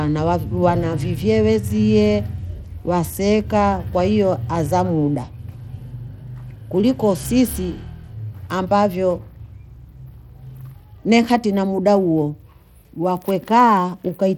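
From the first moment to the last, the speech carries a gritty, grainy layer and the top end flickers in and out instead of staying steady, with nothing at all above about 19.7 kHz. That points to Bluetooth SBC compression as the likely cause, squeezed to a rate that fits roughly 96 kbps. With so few bits to share, the coder starves its upper sub-bands and quantises the rest coarsely, which leaves that fizzy roughness and unstable treble.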